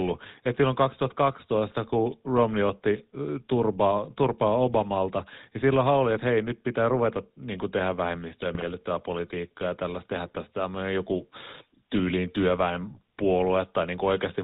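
From start to finish the speech carries the sound of the GSM full-rate codec, plainly audible and consistent with the original 13 kbps mode. The codec rebuilds the voice from a vocal-tract filter driven by a sparse, regularly spaced pulse excitation, so the fine detail of the source is lost and replaced by a buzzy, gravelly texture. With nothing passed above 4 kHz, the result is narrowband and dull, with sibilants blunted.

At 8.54 s a burst of GSM bit errors breaks in and lasts to 8.72 s, about 0.18 s. That span points to roughly nine consecutive 20 ms codec frames being corrupted, which fits an error rate of around one percent on the link. Flipped bits in the filter, pitch and gain parameters drive the decoder into wrong spectral shapes and level jumps from frame to frame, so the voice collapses into a short run of squawks, pops and gargling before it recovers.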